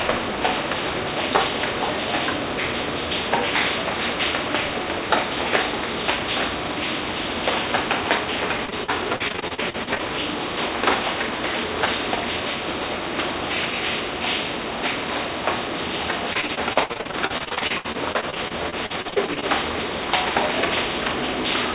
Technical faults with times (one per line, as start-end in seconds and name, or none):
8.66-10.01 repeated packet loss (robotic sound)
16.33-19.44 repeated packet loss (robotic sound)